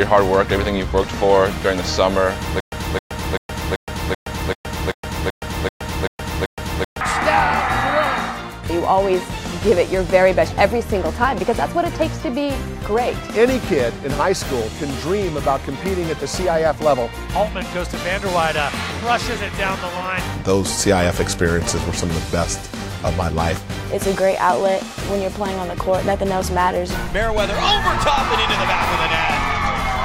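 From 2.6 s to 7.0 s, a 268 ms burst repeats 11 times, each followed by about 118 ms of dead digital silence, pulsing every 386 ms. This stutter with silent gaps likely comes from a stalled player replaying its last fragment, losing the intervening audio.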